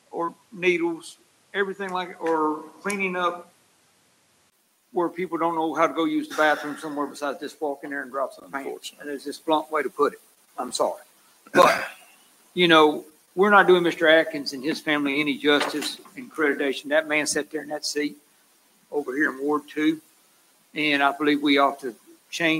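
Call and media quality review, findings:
Input switched to a poorer device, 0.00–4.52 s. Likely a different capture path at the start, with a narrower band: nothing above 13 kHz, so the sound is dull and boxy until the switch. Its own noise floor sits roughly 40 dB under the signal. A 20 ms silence at 4.52 s as the device changes. Level stays steady across the change.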